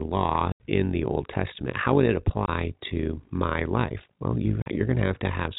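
Speech, carried over G.711 telephone coding that limits it to below 4 kHz, has two faults. Frames were resynthesised with an overlap that does not sum to constant gain, so an overlap-add ripple about 11 dB deep pulses at around 50 Hz throughout. Packet loss filled with silence punches hard-edged gaps at 0.52–0.60 s (80 ms), 2.46–2.48 s (20 ms) and 4.62–4.66 s (40 ms), lengths that fit 20 ms packets.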